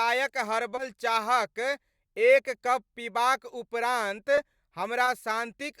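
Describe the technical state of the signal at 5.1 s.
Around 5.05 to 5.09 s, short concealed packet loss: about 20 ms arrived too late, was filled by extrapolating the last sound, leaving a brief smear.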